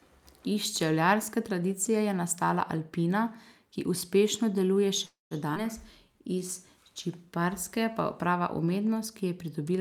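Speech runs for about 10 seconds and has three faults close together. Right after "ki uspešno deluje", a call audio freeze starts at 5.05 s and lasts until 5.34 s. The last sound carries on as a fading buzz or hiss. It then drops to silence for about 170 ms. About 254 ms of filler is inserted in all. When the sound resumes, it picks up where it stopped, with nothing lost. This is likely a case of packets arriving late and the jitter buffer running dry. The delay grows by about 254 ms. Soon after, at 5.55 to 5.59 s, the audio skips ahead. Roughly 70 ms of speech is gone. The two sides are joined by only about 8 ms of fill, so the jump is nearly seamless. It points to the buffer discarding audio, cutting the delay by about 50 ms. From 5.84 to 6.40 s, just before "iz čipkarske pa prava", a jitter buffer slow-down follows. The receiver repeats single pitch periods or bits of pauses many times in a row, adding about 52 ms. 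Speech plays at about 92% speed with unchanged pitch. Sounds in that stretch are drawn out, and there may be a slight warble.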